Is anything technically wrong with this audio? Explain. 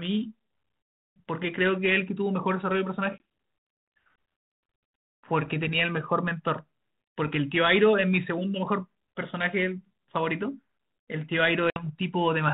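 Yes. Packet loss on an ADPCM call occurs twice in this speech: a hole from 3.18 to 3.20 s, about one packet, and another from 11.70 to 11.86 s losing 60 ms, about three packets. Each gap is hard-edged silence. Because the decoder's adaptive predictor and step size drift out of step with the sender's, speech resumes with slight distortion, settling within tens of milliseconds. The band-limited telephone sound fits 32 kbit/s G.726 ADPCM.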